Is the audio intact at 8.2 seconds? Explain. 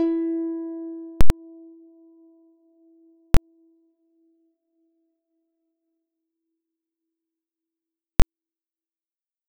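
No. From 8.20 to 8.22 s the music is replaced by invalid numbers at full scale: a calculation produced infinite or invalid values that were pinned at the maximum level for about 23 ms, which fits a 1024-sample block. At this length it sounds like one very loud bang. Unlike a dropout, the block is forced to full scale rather than going silent.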